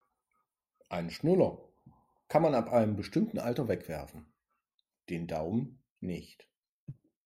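No technical faults are audible.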